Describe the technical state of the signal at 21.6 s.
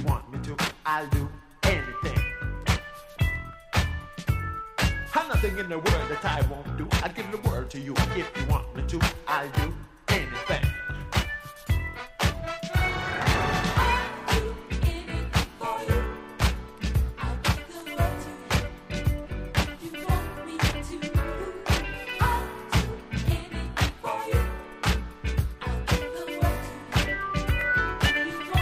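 At 21.59 to 21.61 s there is an overlapping-chunks fault. The audio here was handled in blocks of about 6.0 s, and the next block begins before the previous one has finished, so the final 20 ms of material is played a second time at the join. The repeated fragment breaks the continuity of the waveform, and it is heard as a brief click or stutter at that point.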